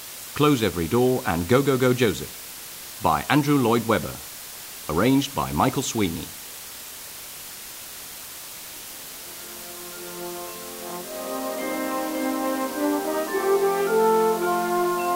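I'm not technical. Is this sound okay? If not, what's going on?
No, there's a steady, even hiss running from start to finish, and it's fairly loud next to the sound itself. That's low bit depth with dither: the audio was stored with very few steps, and added noise hides the roughness. It sounds like only 6 bits.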